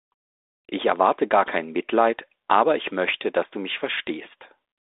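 From 3.08 to 3.15 s, bit errors on the ADPCM link, on a band-limited line that fits 32 kbit/s G.726, produce pops and a rough burst with brief level jumps. Unlike packet loss, there is no gap; the errors knock the decoder's step size and predictor off, so the damage rings on briefly.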